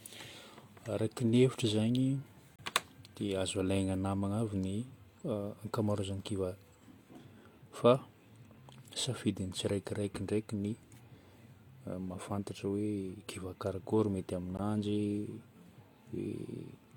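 At 2.56 to 2.59 s, 8.58 s (just before "safidin'ny tsiraikiraiky ndraiky ny") and 14.57 s (after "kiva karakory mety"), gaps between stream segments cut hard silences of about 29, 4 and 16 ms into the speech. They recur every 6 s, and each time the speech resumes exactly where it stopped, unlike a dropout, which loses audio.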